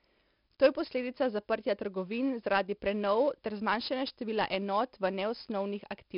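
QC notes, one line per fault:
Throughout: 4-bit ADPCM compression, gritty hiss riding every loud syllable; the spectrogram shows level-tracking noise and a hard ceiling at 5.3 kHz, fitting roughly 44 kbps.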